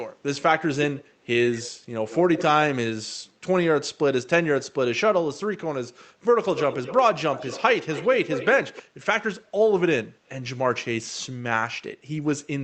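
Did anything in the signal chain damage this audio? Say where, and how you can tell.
Yes. The damage is an echo leak, at the call-processing stage. A faint delayed copy of the speech appears at 0.96–1.05 s and 1.52–1.71 s, trailing by about 155 ms and sitting well below the direct sound. From 6.56–7.05 s, 7.32–8.55 s and 8.73–8.83 s it returns about 206 ms late and mostly much louder, only about 10 dB down at its strongest. The far end likely played the call over a loudspeaker, and its echo canceller let part of that pickup back into the line.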